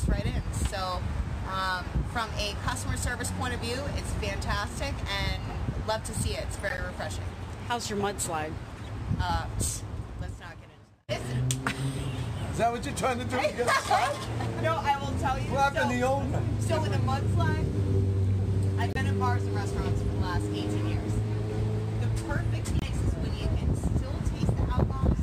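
Corrupt frames decoded at 6.68, 8.77, 18.82 and 22.79 s: bit errors in compressed frames were decoded anyway, so misread gains and codes put energy at the wrong frequencies. Each is a brief chirp or noise burst, 0.04 to 0.15 s long, with the last two loudest.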